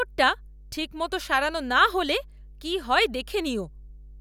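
Mains hum runs from start to finish: a steady 50 Hz tone with low harmonics sits about 20 dB below the speech, loud enough to hear under it throughout. Power-line current is leaking into the signal, likely through a ground loop or a nearby transformer.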